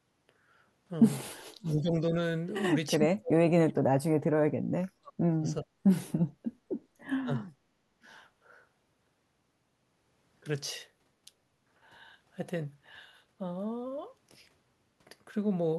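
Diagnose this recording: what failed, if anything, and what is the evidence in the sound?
The failure is in call processing, at the echo canceller. The speech dips three times: 1.62 to 2.14 s, down around 20 dB; 2.96 to 5.7 s, where about two seconds of it drops by as much as 40 dB; and 7.2 to 7.45 s, a short cut of roughly 35 dB. This is speech suppressed in double talk, likely because the far end was talking at the same time. The canceller could not tell the local talker from loudspeaker echo, so it turned everything down.

The same stage also clamps the room sound. From 7.6 to 7.78 s the background is gated by the echo canceller. It drops about 16 dB for a brief moment, then returns. The canceller heard loudspeaker output and pulled the microphone path down hard. The room tone dips while it holds and comes back when it releases. It follows closely on the last speech dip.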